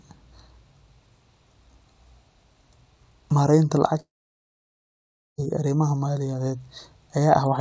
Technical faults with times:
4.00-5.40 long network dropout

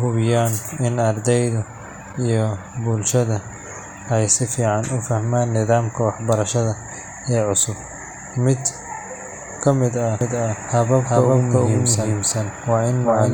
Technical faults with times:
10.21-13.34 doubled audio track

